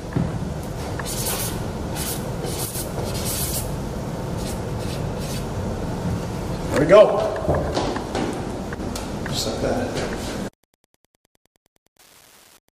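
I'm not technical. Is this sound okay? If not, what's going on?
No. A faint, steady ticking runs under the whole clip, about ten times a second. This is Wi-Fi interference: a nearby Wi-Fi radio sends a short signal every 102.4 ms, and the audio circuitry picks it up and turns it into an audible tick.

At 2.65 to 2.75 s, and again at 8.75 to 8.80 s, the sound briefly gets noticeably quieter, then returns. The likely cause is one channel dropping out: one side of the stereo signal goes missing for that moment, so only half of it reaches you.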